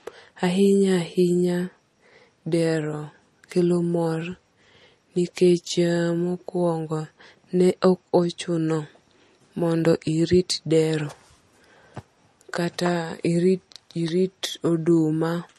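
From start to finish the speech has most likely been through MP3 compression at a low bitrate, with the encoder short of bits for the frequency lines it had to code. It has discarded everything above 12.5 kHz and dropped weaker components that flicker in and out between frames. The damage is plainly audible: the top end is dull, and there is a watery, swirling texture with metallic chirps on s sounds, which fits a rate around 40 kbps.

At 14.08 s an electrical switching spike, likely a brief arc from a nearby switch, motor or static discharge, was picked up by the audio line. It lands on top of the speech as a sharp snap, over almost as soon as it starts.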